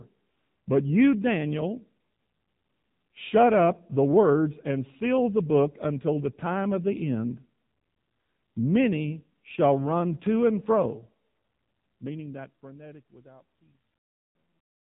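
A speech recording carrying the AMR narrowband mobile codec throughout: nothing reaches above 4 kHz, and the voice has a plainly buzzy, synthetic edge, which fits a low AMR-NB mode of around 7.4 kbps. A simple telephone-band filter would dull the top without that coarse, vocoded texture, which comes from rebuilding the voice from a vocal-tract model and a few pulses per frame. The smooth fade-out over roughly the last three seconds, ending at 14.9 s, has no click.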